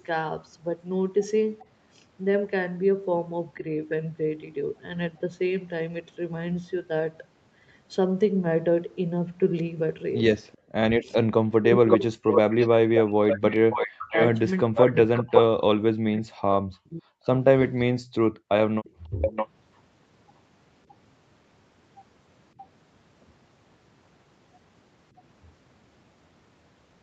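A speech clip with echo-canceller trouble on a loudspeaker call. A delayed copy of the voice comes back three times: a faint blip about 35 dB down and 401 ms late at 10.52–10.57 s, a full-level repeat 561 ms behind from 11.89 to 15.42 s, and another about 5 dB down and 613 ms late at 18.84–19.48 s. That's likely echo leak, with the canceller letting the loudspeaker pickup through. The background is gated by the echo canceller at 10.57–10.74 s and 18.45–18.52 s, with the room sound dropping by about 37 and 40 dB before coming back. The talker also dips hard, around 40 dB over roughly four seconds between 11.03 and 17.27 s, and about 15 dB at 19.04–19.31 s, likely speech suppressed in double talk while both sides spoke at once.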